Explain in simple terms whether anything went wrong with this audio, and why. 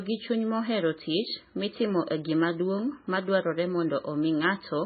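Across the whole recording, the speech has a dull, muffled top end and a watery, swirling quality, the kind of damage MP3 compression leaves when the file is squeezed hard. This is likely the cause: the encoder ran short of data, so it dropped everything above about 4.6 kHz and discarded quieter detail, which flickers in and out between frames. That is why s sounds lose their crispness and the sound seems to churn.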